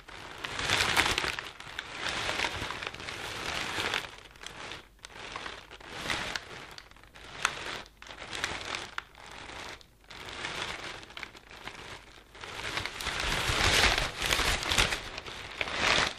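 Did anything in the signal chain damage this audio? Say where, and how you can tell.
Yes. There are chunks out of order at the buffer or network stage, at 2.21 to 2.24 s and 4.44 to 4.47 s. Each is a brief jumbled moment. A 10 ms chunk seems to arrive about two chunks late and play after audio that should follow it, leaving three hard joins.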